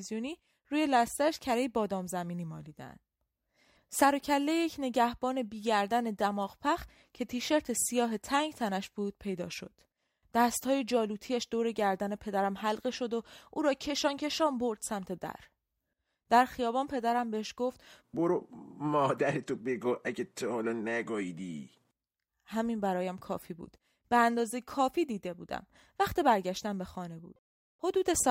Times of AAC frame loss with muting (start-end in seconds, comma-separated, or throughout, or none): none